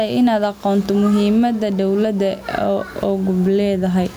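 Throughout, the gain is set far too high, with a fast limiter the likely cause, so the level swings by around 10 dB: gain pumping.

From 0.42 to 3.88 s, an unlocked receiving clock drops or repeats a single sample roughly every 0.4 s, producing steady, sharp word clock ticks.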